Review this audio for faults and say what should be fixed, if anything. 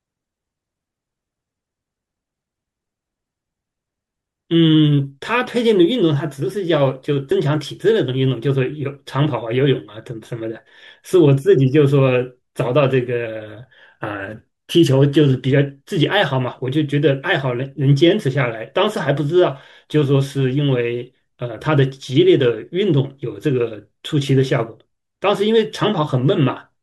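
A short glitch cuts into the speech from 7.28 to 7.32 s, lasting under 40 ms. It comes from damaged data in the compressed stream. Some bytes in that stretch of the encoded file were corrupted, so the decoder read garbage where valid frames should be, lost its lock on the frame structure, and produced this glitch until it found the next good frame header. To prevent it, verify file integrity with checksums during transfer and storage, and re-fetch or re-encode from a clean source.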